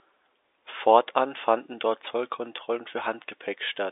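No faults found; the speech sits in the narrow line band of G.711 telephone coding, 300 Hz to 3.7 kHz with nothing above 3.8 kHz, and codec damage is faint at most.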